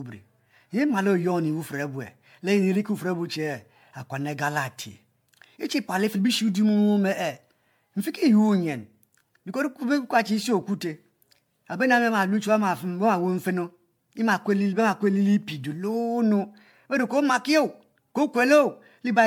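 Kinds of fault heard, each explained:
Generation loss: the speech has a swirly, smeared, hollow character all the way through, more than one MP3 pass at something like 96 kbit/s would explain, and consonant attacks come out soft and blurred. The audio was likely decoded and re-encoded around seven times. Each pass quantises on a shifted frame grid, so the noise and spectral holes stack up. Content still extends to about 20.1 kHz.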